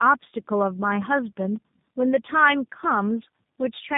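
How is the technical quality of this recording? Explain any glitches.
The quality is poor throughout because of tandem speech coding. The call seems to have passed through two low-bitrate speech codecs in a row, likely an AMR-NB and then a G.729A link, the second re-coding the first's already damaged output. The errors compound, so the speech sounds rough, muffled and warbly, with nothing above 3.8 kHz.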